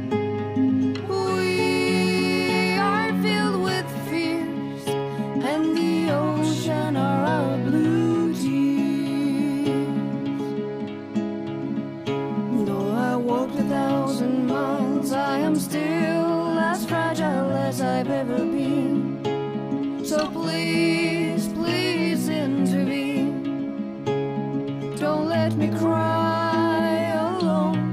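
Sample clock jitter, 11.60 to 14.49 s: an unsteady converter clock mistimes samples by a microsecond or two, adding hiss roughly 45 dB below the audio.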